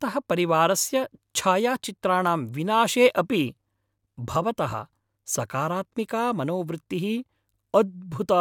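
No technical faults are audible anywhere in this speech recording.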